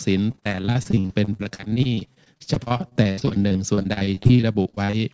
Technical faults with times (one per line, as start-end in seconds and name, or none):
0.32-4.95 repeated packet loss (robotic sound)